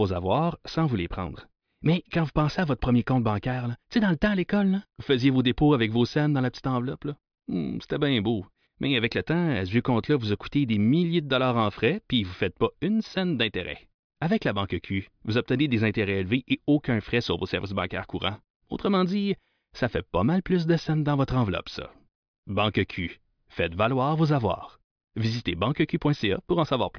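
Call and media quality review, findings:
No audible faults in the speech signal: no dropouts, clipping, glitches or level anomalies to report for any component in the chain.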